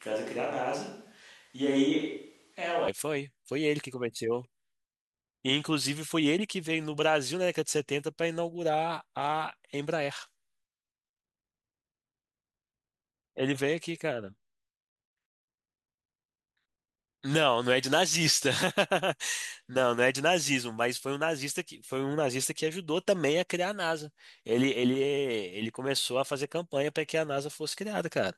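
From the first moment until 2.88 s, the speech sounds roomy and hollow, thin in the bass, about 5 dB quieter, with room noise sitting roughly 35 dB below the voice. At 2.88 s it snaps abruptly to a close, full sound. The likely cause is a switch to a distant microphone: the close microphone's signal was missing at the start, so a microphone farther away carried the audio, picking up more room reflection and less low-frequency body.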